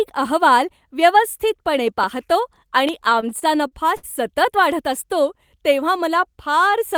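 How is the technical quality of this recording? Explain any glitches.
The recording has two audible glitches: a pair of loud pops and a stretch of stuttering speech.

Loud pop: Sharp clicks at 2.04 s, just after "अहवाल व्यवस्थितपणे", and at 2.89 s, the second clearly louder, with the speech continuing beneath. They are likely voltage spikes from a switch, plug or static discharge.

Repeated stalls (stutter): From 3.01 to 4.05 s, just before "सतत वाढत असतो तेव्हा", the speech drags through seven brief holds, the longest 64 ms. Late packets repeatedly emptied the jitter buffer, and the receiver stretched the last sound to fill about 159 ms.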